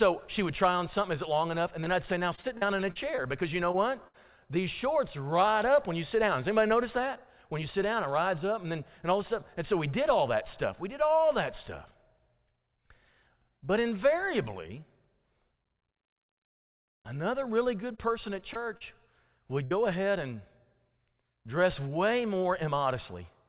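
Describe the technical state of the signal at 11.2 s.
At 11.2 s the speech is intact, with no dropout, glitch or distortion, only the narrow band of the call path, where G.711 mu-law coding leaves nothing above 4 kHz.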